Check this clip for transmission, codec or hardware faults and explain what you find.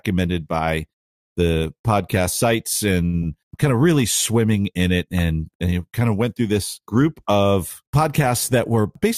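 Three network-related faults are audible in this speech clip: two close together just after three seconds and one near the end.

Short stall from a late packet, 3.05 to 3.16 s. A packet arrived late, the jitter buffer ran dry, and the receiver held the last sound for 81 ms until the packet came in, then resumed from the same point. No speech is lost, but the sound hangs unnaturally long with a faint buzzy or dipping quality. The playout delay also grows by 81 ms from here on.

Short concealed packet loss, 3.22 to 3.38 s. This time 20 ms of audio never reached the decoder in time. The receiver covered the gap by extending the preceding sound, continuing its pitch where it was voiced and using shaped noise where it wasn't, then crossfaded back into the real signal. About ten milliseconds end up added overall. It comes across as a brief smear or wobble right after the stall.

Jitter buffer speed-up, 8.59 to 9.06 s. 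The buffer had built up more audio than its target, so the receiver cut short pitch-period-sized pieces repeatedly to reduce latency, removing roughly 50 ms in total. Playback runs at about 110% speed with the pitch unchanged, so the closing stretch of speech sounds hurried and compressed in time.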